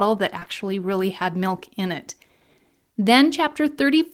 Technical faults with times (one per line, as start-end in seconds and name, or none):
0.39-0.48 short concealed packet loss